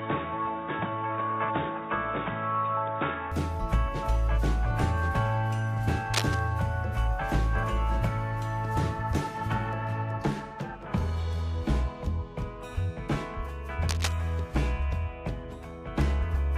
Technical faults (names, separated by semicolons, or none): input switched to a poorer device; cable scratch noise